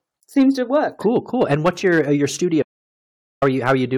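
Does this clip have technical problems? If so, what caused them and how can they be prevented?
Yes. Throughout the speech, the loudest peaks crackle with a harsh, gritty edge. This is hard clipping. The signal runs about 9 dB past what the recording chain could pass, so around one percent of samples are cut flat, adding high harmonics. Lowering input gain to leave headroom for peaks prevents it.

From 2.63 s to 3.42 s, right after "your uh your studio", the sound cuts to dead silence with no room tone for about 0.79 s. This is an audio dropout to silence. The input was likely lost to a loose connection, a failing link or a stray mute while the recorder kept writing silence. Secure cabling and live input monitoring prevent it.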